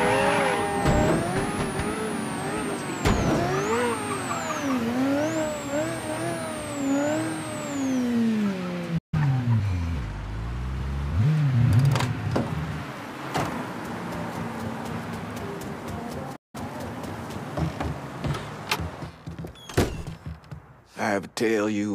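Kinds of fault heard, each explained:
Playback stall: the sound stops mid-flow and the output goes silent, once for about 146 ms at 8.98 s and again for about 177 ms at 16.36 s, likely because the player ran short of data or was blocked. Waveform and spectrogram show flat, empty gaps there.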